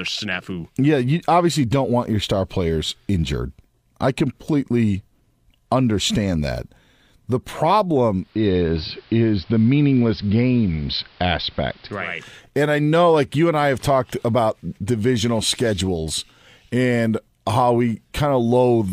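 Speech clip with digital radio blending to analogue from 8.16 to 12.23 s: a 314 ms cross-fade to AM adds hiss and shifts level about 1 dB, returning before "and i know like".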